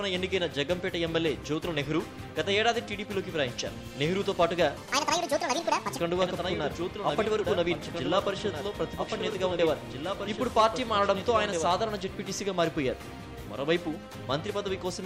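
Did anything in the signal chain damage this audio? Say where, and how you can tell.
Yes. From 4.77 to 5.99 s a section at the wrong speed runs 1.69 times fast, about ten semitones high, likely from a playback clock mismatch. On a spectrogram, its harmonics jump upward and compress in time.

A doubled audio track spans 6.22 to 12.02 s: a full-band copy about 5 dB quieter trails by roughly two seconds, likely from a duplicated capture path. The spectrogram shows repeated patterns offset by that gap, starting and stopping abruptly.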